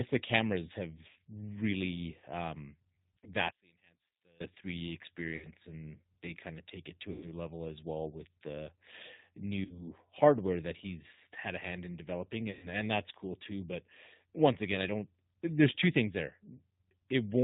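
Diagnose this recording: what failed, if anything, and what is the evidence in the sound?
The codec stage is the source of the constant coloration. Throughout the clip the speech has the band-limited, slightly rough and synthetic quality of the G.729 codec, running at 8 kbit/s and consistent with the G.729A variant. Nothing above 4 kHz survives. The damage is plainly audible because the decoder rebuilds each 10 ms frame from a vocal tract filter, a pitch predictor and a sparse set of pulses, not the original waveform.

On the network side, six short gaps show VoIP packet loss concealed by the speech codec. They occur at 1.11–1.17 s, at 3.18–3.30 s right after "really um", at 5.36–5.50 s, at 7.12–7.29 s, at 9.65–9.83 s just before "hardware that he's had", and at 12.51–12.68 s between "a hand in developing" and "and that's cool too". Each gap is stretched and fading, as a buzzy tone or a coloured noise, and the voice stays weak for a moment after it. 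The missing audio runs from 40 ms up to 120 ms, the longest at 12.51 s. At 3.18 s the loss is broken into short runs across about 80 ms.

At the channel or mixing stage, from 3.50 to 4.40 s the level collapses by about 23 dB, leaving a faint residue of the sound. The collapse is sharp and sustained for almost a second, which points to cancellation. The likely cause is one channel inverted. With reversed polarity on one side, the centred content common to both channels cancels when they are summed to mono, and only their small difference remains audible.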